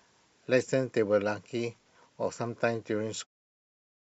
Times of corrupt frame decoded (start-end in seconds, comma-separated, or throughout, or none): 0.61-0.63